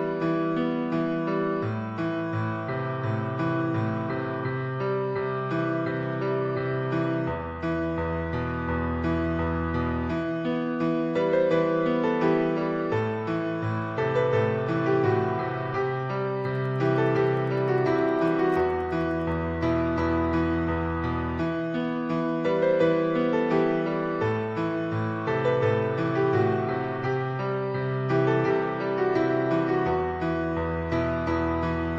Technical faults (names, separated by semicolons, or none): Wi-Fi interference